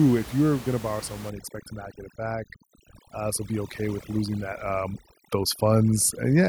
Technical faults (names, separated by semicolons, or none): overdone noise removal